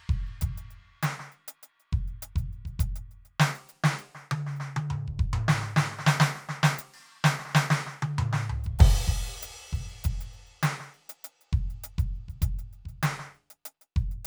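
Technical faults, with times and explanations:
No technical faults can be heard in this music clip. There is nothing to mark at any time.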